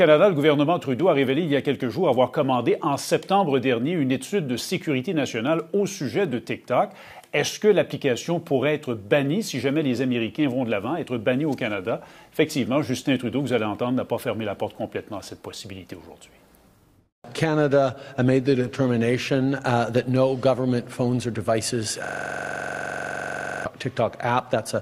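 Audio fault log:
22.05 to 23.65 s, system hang loop: a rapid, mechanical stutter-buzz as one 42.67 ms fragment repeats 38 times at 23.4 Hz. The system froze while the sound hardware kept replaying the same ring buffer, which fits a 2048-sample buffer.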